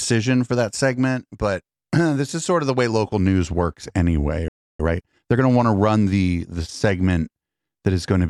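A playback stall at 4.48 s cuts the speech off mid-flow, leaving silence for about 0.31 s until 4.80 s, when the speech resumes. The likely cause is the player running out of buffered data or having its output thread blocked.

Time-compressed catch-up follows from 4.80 to 5.42 s: to recover the lost time, the player cuts out small pieces and cross-fades the remainder, so the speech runs about 1.5 times faster at its normal pitch.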